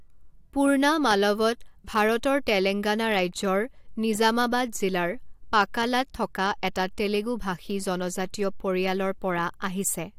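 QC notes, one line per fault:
No faults found in the speech. Nothing here calls for a QC note.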